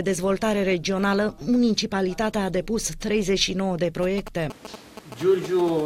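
From 4.03 to 5.70 s, GSM signalling bursts from a nearby 2G phone sound as a galloping dit-dit-dit of short 217 Hz buzzes, roughly 10 dB below the sound, appearing as clustered harmonic stripes on a spectrogram. At 5.80 s, a brief GSM phone buzz, a rectified 217 Hz raspy pulse about 11 dB down, shows as a short comb of harmonics.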